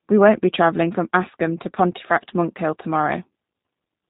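From start to finish the speech carries plain G.729 codec damage. Everything above 4 kHz is gone, and the voice comes out rough and slightly synthetic, rebuilt from a vocal tract filter, pitch predictor and sparse pulses, which fits an 8 kbit/s G.729A stream.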